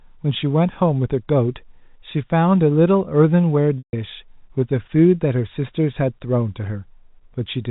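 Around 3.78 s there's a packet loss with pitch repetition, running to about 3.93 s. Roughly 150 ms of audio went missing, which points to something like five packets in a row. To cover the gap, the receiver looped the last pitch period and faded it over about 50 ms. Because the gap is longer than that fade, you hear a brief buzzy hold sinking into silence, then the speech cross-fading back in.

From about 5.01 s to the end, there's channel delay with comb filtering. One channel lags by a tiny amount, which fits a shift of around two samples, a few hundredths of a millisecond. When the channels are summed to mono, the first cancellation notch lands up near 10 kHz. That's above what the G.711 telephone band carries anyway, so instead of an obvious hollowness you get a slight dulling and loss of air at the top of the band in that stretch.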